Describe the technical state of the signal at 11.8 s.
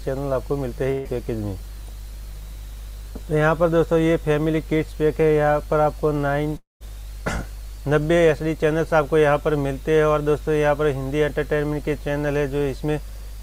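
At 11.8 s the signal is intact, with no audible fault at that point.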